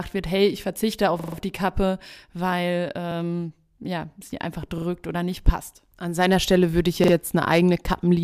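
Speech with a repeated buffer fault at four points: 1.20 s (lasting about 0.17 s), 3.12 s (about 0.04 s), 4.78 s and 7.04 s (about 0.09 s each). Each time the same 43 ms slice plays back-to-back with hard joins, which fits a 2048-sample buffer replayed while fresh audio was late. Unlike a dropout, there is no silent gap, and the speech then resumes with practically nothing missing.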